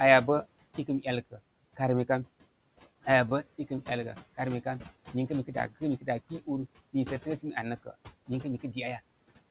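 Noise suppressor artifacts run throughout the speech: the suppressor pulls steady noise down by about 18 dB frame by frame, so the noise sinks between phrases and rises under the words. At 3.29 s, a short stall from a late packet holds the sound for about 18 ms, a held sound with a slight buzz or dip and nothing lost.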